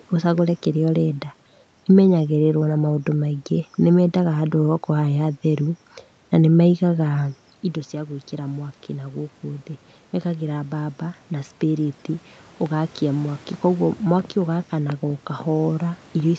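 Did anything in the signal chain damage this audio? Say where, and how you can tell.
Yes. In the call processing there is automatic gain rising from 7.91 to 12.01 s, after "na nĩ methaga indo". Voice and room noise swell together as the AGC adds about 6 dB to compensate for an input about 11 dB quieter.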